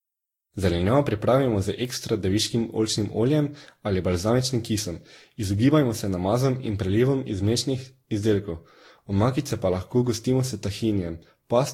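Throughout the speech there is generation loss: a swirly, hollow smear, with consonant attacks blurred and nothing above 16.7 kHz. The damage is heavier than a single encode at a rate around 60 kbit/s would explain, which points to Vorbis coding repeated roughly seven times. That is likely the cause, since each pass requantises on a shifted frame grid and stacks new holes and noise. A single low-bitrate pass would sound thin but not this compounded.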